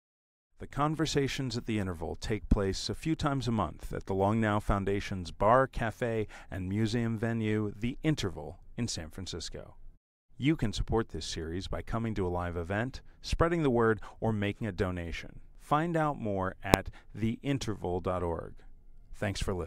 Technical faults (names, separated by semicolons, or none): invalid numbers at full scale